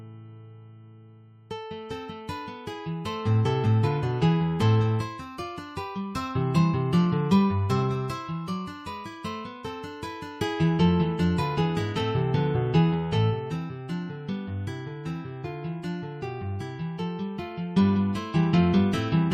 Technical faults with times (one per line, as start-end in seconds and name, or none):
none